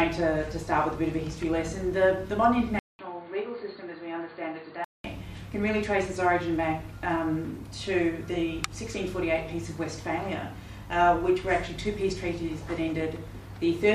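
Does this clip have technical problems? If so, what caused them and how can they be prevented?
Yes. From 2.79 s to 5.04 s, the sound turns dull and boxy, with nothing above 4.6 kHz. A gap of 200 ms opens at the switch. The level drops by about 5 dB. New background noise appears, about 35 dB below the signal. The likely cause is an input switched to a poorer device in mid-recording. That device passes a narrower band and adds its own tone and noise. To prevent this, lock the input device before recording.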